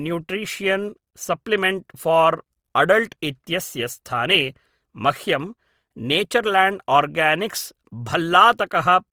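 A speech recording with plainly audible Opus compression throughout: full-bandwidth but grainy, rough and noise-filled, likely the codec's music mode at a low rate around 24 kbps.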